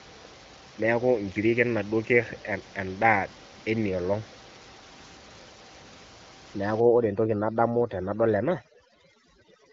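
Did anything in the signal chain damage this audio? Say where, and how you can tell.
Yes: overdone noise removal in call processing, from 6.8 s to the end. The suppressor cuts bands near its noise estimate, leaving twinkling near-silence and taking quiet parts of the voice with them.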